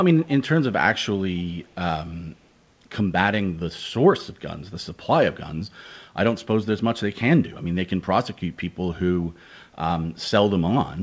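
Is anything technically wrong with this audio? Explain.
Yes. From 1.38 to 1.44 s a very faint, delayed copy of the speech slips in behind it, trailing by about 138 ms and sitting far below the main level. This echo leak is likely from a loudspeaker on the far end of the call: its microphone picked up the playback, the echo canceller failed to remove that brief scrap, and it was sent back, so a short ghost of the talker's own speech arrives late.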